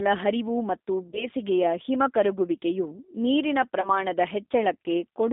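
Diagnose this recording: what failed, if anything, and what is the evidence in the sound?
At the codec stage, the speech passed through a G.729 codec at 8 kbit/s. Nothing survives outside roughly 250 Hz to 3.7 kHz, and the frame-by-frame pulse-and-filter rebuild leaves speech plainly rough and synthetic throughout, with a thin, band-limited telephone sound.

At the network stage, packets went missing and the G.729 decoder covered the gaps with VoIP packet loss concealment. From 1.11 to 1.27 s and from 3.81 to 4.01 s, speech is stretched and fades. The gaps of about 30 ms and 20 ms fit three and two lost 10 ms frames. Distortion persists past each gap while the decoder's state recovers.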